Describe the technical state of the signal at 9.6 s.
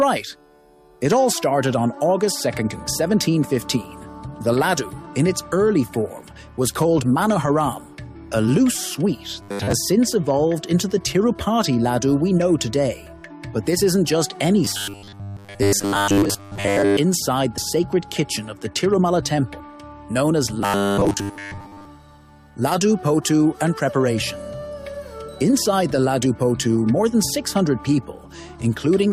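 At 9.6 s the signal is in a burst of robotic sound from repeated short buffers, running from 9.42 to 9.72 s. A rigid metallic buzz at 100 Hz replaces the natural texture, which fits a 10 ms slice being looped most of that time, likely because new audio arrived too late and the missing stretch was skipped. Unlike comb filtering or flanging, the buzz pitch stays fixed rather than sweeping, and the audio beneath it is lost rather than coloured.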